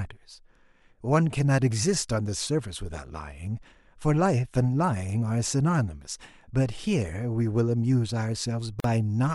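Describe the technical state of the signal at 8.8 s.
At 8.8 s the speech drops out for about 43 ms, running to 8.84 s, and that's a gap at a join of encoded pieces. It sounds like the clip was encoded in sections and butted together without trimming, so the encoder's start-up delay and the padded final frame both survived as silence. You hear a brief hole with smeared edges, and then the speech picks up right where it left off.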